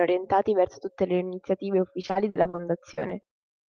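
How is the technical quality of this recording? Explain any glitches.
The speech carries one clear glitch in its final stretch. The band tops out near 12 kHz, which fits a call codec such as Opus.

From 2.01 to 3.45 s, just after "verso tutte le iniziative", there is repeated packet loss, giving robotic sound. Audio drops out again and again, with gaps up to 60 ms. Each hole is filled by stretching the last sound. About 28% is patched, so the speech turns choppy, with pieces missing.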